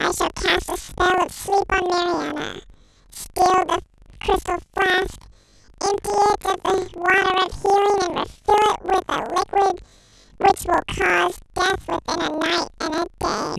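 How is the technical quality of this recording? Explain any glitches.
The technical quality is poor, with one fault running through the whole speech clip.

Planar audio read as interleaved, from start to finish: each 40 ms block stores all its left-channel samples and then all its right-channel samples, but playback treats them as alternating left-right pairs. Each block is squeezed into double speed, left half then right half, so the timing holds while the pitch rises 12 semitones, a full octave. The block switching adds a 25 Hz flutter over the speech.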